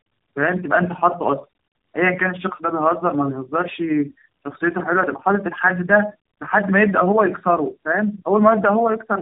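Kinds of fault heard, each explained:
Tandem speech coding: the speech passed through several low-rate speech codecs in succession, each decoding and re-encoding the previous coder's already degraded output, so the errors accumulate. Here the audio is band-limited with nothing above 3.7 kHz, and it has a rough, muffled, warbly quality throughout, worse than a single narrowband coder would give. That character points to three speech coders in a row, for example something like G.729A, iLBC and AMR-NB linked through G.711 hops.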